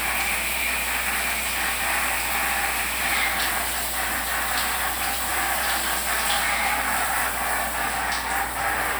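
Mains hum runs through the entire clip, from the first moment to the last, as a steady low tone at 60 Hz sitting underneath the everyday sounds. Power-line current has leaked into the signal path, most plausibly through a ground loop between connected equipment or from a transformer close to the cabling. The hum is fairly prominent, roughly 15 dB below the wanted sound, and it does not change as the sounds come and go.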